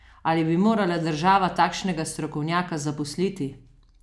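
No technical faults are audible anywhere in this speech recording.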